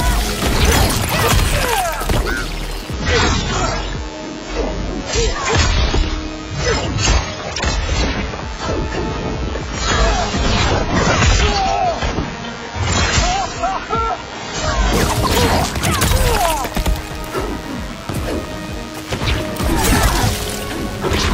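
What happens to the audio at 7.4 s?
At 7.4 s the audio is inside a stretch of adaptive stream at a lower bitrate, running from 2.93 s to 14.93 s. When the connection slowed, the player switched to a much leaner encode of the same material. The change is abrupt but leaves no gap. The treble is cut off, with nothing above 7.6 kHz, and the sound turns dull and smeared with codec artefacts. This points to a drop from a fairly high AAC-LC rate to something near 16 kbit/s.

A DECT cordless phone buzz is also present at this point, as it is across the whole clip. A nearby DECT handset or base sends a brief radio burst every 10 ms, and the audio circuitry rectifies it into a thin, steady 100 Hz buzz rich in harmonics. It sits roughly 20 dB below the wanted sound.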